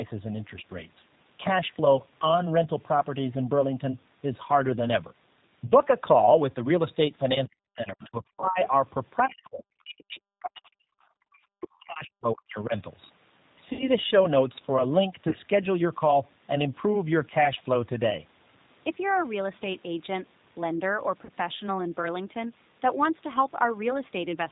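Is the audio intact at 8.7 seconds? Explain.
No. From 8.65 to 8.69 s a brief scrap of a second voice appears under the speech, faint at about 25 dB below the talker. It is most likely the other side's voice leaking through: the far end played on the talker's loudspeaker, reached the microphone, and the echo canceller let a 40 ms fragment slip past. It is short, a momentary fragment rather than anything continuous.

The same moment also carries the G.729 codec damage present across the whole clip. The sound fits an 8 kbit/s G.729-family coder, which models the voice with a vocal tract filter, a pitch predictor and a few pulses per 5 ms subframe instead of coding the waveform. The result is plainly audible: slightly rough, synthetic speech with nothing above 4 kHz, so sibilants and brightness are missing.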